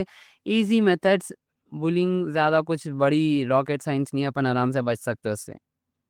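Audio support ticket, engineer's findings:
No faults found on listening; the speech recording shows no dropout, distortion, glitch or other defect that would need attention.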